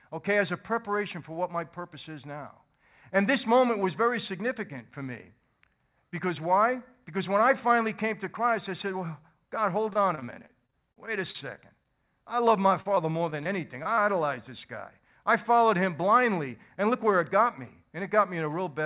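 It's a speech recording that went through a phone-style call path. Nothing comes through above 4 kHz, which fits G.711 mu-law at 64 kbps. The first problem is repeated packet loss (robotic sound) from 9.9 to 11.89 s, right before "I love my". There are 15 separate dropouts in that stretch, the longest about 35 ms, and each one gets patched by stretching out the previous sound. Roughly 15% of the span is fill, which is why it turns choppy. It comes back from 12.82 to 13.47 s, just after "I love my", with 6 gaps of up to 32 ms making up about 19% of that span, so it sounds a bit more broken there. Right after that there are two short concealed packet losses, at 13.83 to 13.87 s and 13.95 to 13.99 s, each about 20 ms of missing audio filled in. They're quick: a little smear or wobble as the receiver extends the last sound and blends back into the real signal. Last, from 16.40 to 17.03 s, just before "where it got me", there's a jitter buffer speed-up. 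The buffer had built up extra audio, so the receiver trimmed out small pitch-period chunks, around 40 ms in total. Playback runs at about 106% speed with the pitch unchanged, so that phrase sounds slightly hurried.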